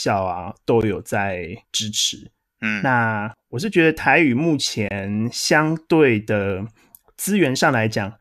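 A gap at a join of encoded pieces appears at 0.81 s, a 15 ms hole of silence cut into the running speech, and again from 4.89 to 4.91 s, lasting about 23 ms. Each piece was encoded on its own and butted together untrimmed, so the encoder's start-up delay and last-frame padding sit between them as dead air. Both gaps have their edges smeared by the codec, and the speech resumes exactly where it broke off.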